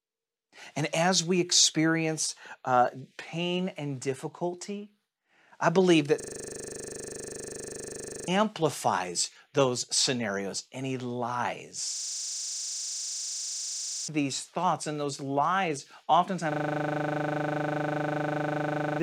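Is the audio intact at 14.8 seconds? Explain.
Yes, the speech at 14.8 seconds is intact, with no dropout, click, distortion or other fault at that moment.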